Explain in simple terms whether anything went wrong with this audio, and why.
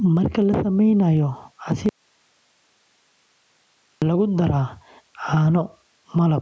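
Two things went wrong. The first is gain pumping, which runs through the whole clip. The microphone level was most likely set far too high, so a fast limiter keeps pulling the volume down whenever the speech gets loud. Loud and quiet parts end up squeezed closer together, so the speech sounds flattened and squashed.

The second is an audio dropout to a faint residue, from 1.89 to 4.02 s, a gap of about 2.1 seconds. The speech itself most likely stopped reaching the recording, while everything after that point kept running. Right after "la sameynayo" the voice cuts out abruptly, not like a natural pause or fade. For those two seconds only faint hiss remains, far quieter than the speech. The voice then snaps back in mid-flow with "lagu daraa".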